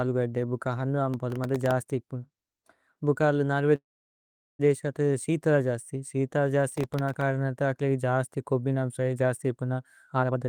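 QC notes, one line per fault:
1.14–1.71 s and 6.69–7.21 s, processor overload crackle: in both runs the processor fell behind on very short buffers, around 0.7 ms each, and missed roughly fifteen deadlines in a row. Each miss replayed a sliver of old audio with hard edges, so the speech picks up a gritty, tearing crackle for about half a second before clearing. The second run sits between "ത ശീതല ജസ്തി ശീതല" and "കരനരത ഏക് ലേന ജസ്തി".
3.75–4.61 s, call audio freeze: packets were likely held up in transit, emptying the jitter buffer after "ഭുക അര്ല നര്വ". The receiver stretched the last sound briefly, then fell to silence for about 0.78 s of the 0.84 s gap. Speech resumes at "ദേശ ത ശീതല ജസ്തി" with nothing lost, but everything after now runs 0.84 s later.
10.06–10.47 s, jitter buffer speed-up: after "ജസ്തി ഇപന" the receiver found too much audio queued and trimmed short pitch-period slices repeatedly, cutting about a fifth of a second. 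The final stretch plays at 149% speed with unchanged pitch, so the speech sounds rushed and clipped in rhythm.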